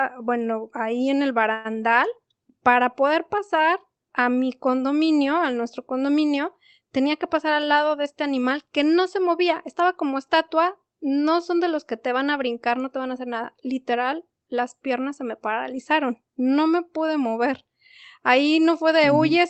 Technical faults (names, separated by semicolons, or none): call audio freeze; jitter buffer speed-up